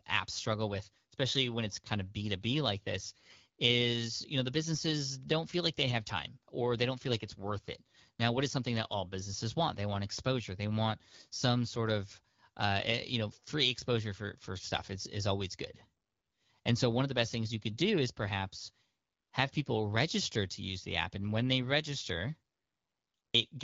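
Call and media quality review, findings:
AMR bit errors at 12.10–12.14 s: brief hoarse, gargly scratch, level and pitch held. Fits two 20 ms frames with a few percent of unprotected bits flipped.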